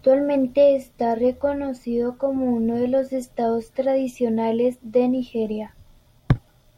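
Nothing in this speech recording points to a technical fault at any point in the signal.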